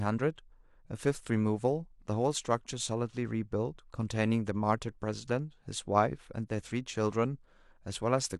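Nothing goes wrong anywhere in the speech here, so there's no technical fault to point to at any moment.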